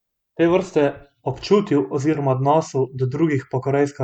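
No technical faults occur at any point in the recording, so there is nothing to describe in time order.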